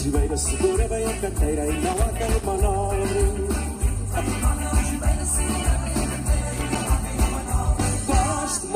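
An irregular burst of scratchy crackle cuts through the sound from 1.85 to 2.45 s, and a shorter one returns from 6.52 to 6.81 s. This is loose connector crackle: a worn or dirty contact flickering open and shut, chopping the signal.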